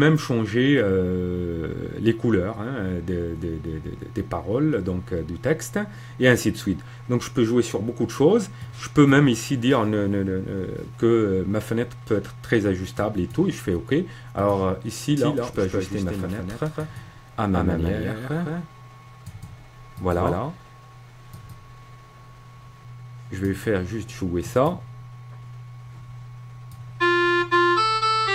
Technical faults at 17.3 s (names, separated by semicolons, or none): doubled audio track